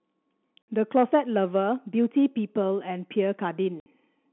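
Telephone-band speech, coded as G.711, has two packet loss gaps filled with silence, at 0.62 to 0.68 s and 3.80 to 3.86 s. Each hole is 60 ms of dead air with hard edges, which fits three lost 20 ms packets. Concealment would smear or repeat the sound instead.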